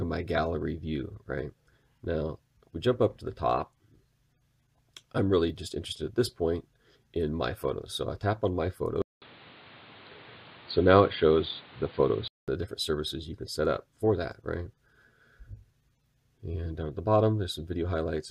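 The audio goes dull and boxy from 9.02 to 12.48 s. At the start of that stretch there is a short gap of about 200 ms, then nothing above 4.7 kHz, a level shift of about 5 dB, and a new background hiss roughly 30 dB below the signal. Full bandwidth returns at 12.48 s. The likely cause is the input switched to a poorer device, such as another microphone or a headset call profile, and then switched back.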